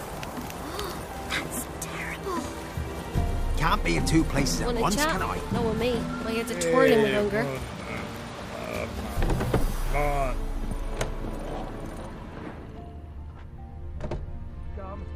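No technical faults can be heard anywhere in the recording; the signal stays steady and intact throughout.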